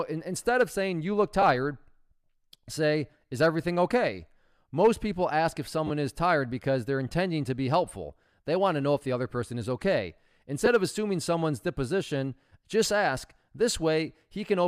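Lost LE Audio frames interrupt the speech three times, and the LC3 decoder fills each gap by replaying the last spectrum with random signs, leaving a brief noisy smear. The first comes at 1.42 s after "of saying you look", a single 10 ms gap. The second runs from 5.87 to 5.90 s, between "people ask if" and "is tired because they're", and its 30 ms length fits three frames. The third is at 10.66 s, between "other person is okay" and "of assuming someone's disposition", and fits one frame.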